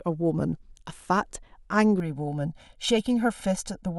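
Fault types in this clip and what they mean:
Channel delay (comb filtering): from 2.0 s to the end the speech turns hollow and phasey, as one channel lags about 1.5 ms and mono summing notches from around 400 Hz.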